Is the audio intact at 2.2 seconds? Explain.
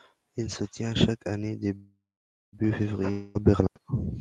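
No. At 2.2 s the audio sits inside a call audio freeze from 1.75 to 2.55 s, likely caused by delayed packets emptying the jitter buffer. The last sound stretches into a fading buzz, then about 0.53 s of silence. Speech resumes where it stopped, with nothing lost but everything after it 0.77 s late.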